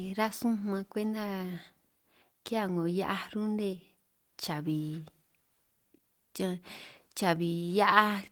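No faults in this speech clip: the Opus coding sounds like hybrid mode at about 24 kbps, keeping the full band up to about 20.2 kHz with only light codec damage.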